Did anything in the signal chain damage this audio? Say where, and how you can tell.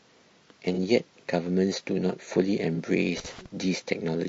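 Yes. Throughout the speech there is a rough, grainy texture, with noise between the harmonics and a thin, synthetic-sounding top band. At the codec stage this is likely low-delay AAC compression (AAC-ELD). Its short frames resolve pitch poorly, and the damage level fits a rate near 32 kbps.

At 0.74 to 0.79 s and again at 2.75 to 2.79 s there is a brief smeared, phasey patch. These are network-stage AAC frame loss with concealment. Each gap of about 30 ms points to a single lost frame that the decoder rebuilt from the previous good spectrum.

From 3.17 to 3.46 s an irregular burst of crackle and scratching cuts across the signal. This is loose connector crackle in the analogue wiring: a worn or dirty contact making and breaking rapidly, chopping the signal.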